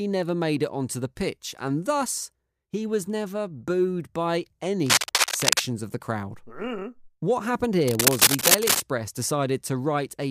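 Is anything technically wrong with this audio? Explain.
Yes. From 4.86 to 5.60 s, between "was never booed by" and "of the crowd", and again from 7.88 to 8.80 s, dense ragged scratching rises somewhat above the speech. This is cable scratch noise, likely from a worn cable or connector whose contact resistance flickered as it moved.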